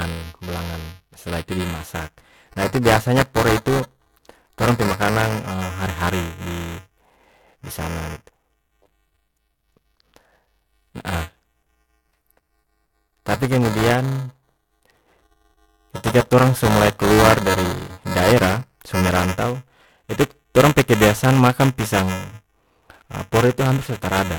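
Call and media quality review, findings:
Buffer tearing, throughout the speech clip. Steady robotic buzz at 375 Hz, heard only while speech is present. Probable component: playback ring buffer, consistent with a 128-sample period at 48 kHz. Writer and hardware read pointer have slipped and cross each period, so a small slice of each buffer replays audio a few milliseconds old, with hard joins on both sides.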